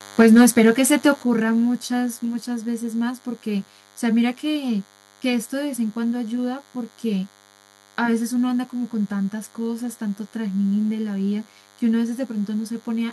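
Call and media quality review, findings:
DECT cordless phone buzz, entire clip. Steady thin buzz at 100 Hz, rich in harmonics, roughly 30 dB under the speech. Nearby DECT handset or base bursting every 10 ms; audio circuitry rectifies the radio pulses into the signal path.

Microphone overload, 0.19 to 0.7 s. Harsh, crackling edge on the loudest syllables. Peaks about 5 dB past the converter's limit, tops flattened on a small share of samples. Likely cause: mic input gain set too high, driving the converter into its limit.

Microphone volume stepped down, 0.22 s. Speech and background drop abruptly by 4 dB, right inside the distorted peak. Likely cause: call software's input-level control reacting to clipping and lowering device gain in one step.

Microphone volume stepped down again, 1.23 s. Further sudden cut of 7 dB to speech and background together. Likely the same control cutting device input gain once more after the overload.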